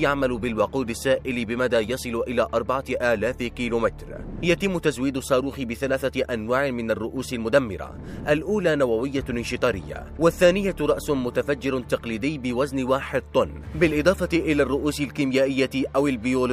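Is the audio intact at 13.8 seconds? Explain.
Yes, the audio at 13.8 seconds is intact, with no audible dropout, click, distortion or other fault at that point.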